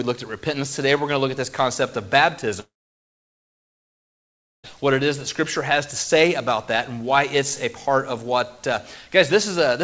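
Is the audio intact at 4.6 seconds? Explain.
No. At 4.6 seconds the sound is still absent, inside a gap running from 2.60 to 4.67 s, most likely a long network dropout. The last sound is stretched into a brief fading buzz, then about 1.9 s of near-silence follows, and the audio resumes without the missing two seconds. Unlike a brief packet loss, which leaves only a short smeared glitch, this concealment gives out and the stretch is simply lost.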